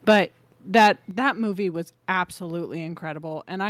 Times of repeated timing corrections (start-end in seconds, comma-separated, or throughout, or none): none